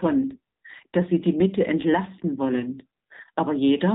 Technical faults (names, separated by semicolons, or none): AMR narrowband mobile codec; AMR bit errors